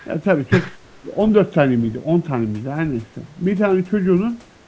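An echo canceller on the far end, likely running a loudspeaker call, let some of its microphone pickup through, producing an echo leak in this speech recording: from 0.0 to 0.07 s a faint, delayed copy arrives about 335 ms late, sitting roughly 30 dB below the talker. Later, speech suppressed in double talk appears, likely because the canceller mistook the talker for loudspeaker echo while both sides spoke and turned everything down. The voice dips by around 10 dB for about a tenth of a second, from 1.02 to 1.12 s. Throughout, the call's microphone processing leaves nothing above 8 kHz.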